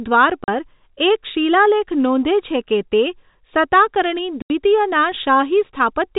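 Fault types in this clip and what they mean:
Packet loss filled with silence: packets carrying the speech never reached the receiver, which played silence in their place instead of concealing the gap. The result is two abrupt holes in the speech, a 40 ms dropout from 0.44 to 0.48 s and an 80 ms one from 4.42 to 4.50 s. Both lengths fit whole runs of 20 ms packets, and their edges are hard, cut into the narrow telephone band of the G.711 coding.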